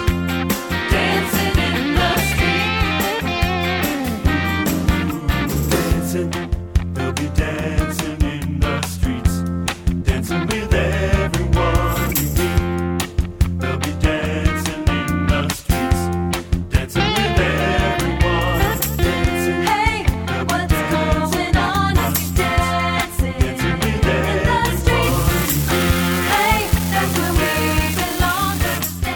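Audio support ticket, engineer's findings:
Unreliable data bit, 25.03 to 28.78 s. Steady crackle and fizz across that span, continuing through pauses. Probable component: one marginal data line in the converter or interface path, its bit flipping at random. Each flip is the same size of step, about -13 dBFS. Unlike hiss or a raised noise floor, this is hard, uniform spiky clicks. Unlike clipping distortion, it does not follow signal level and persists in silence.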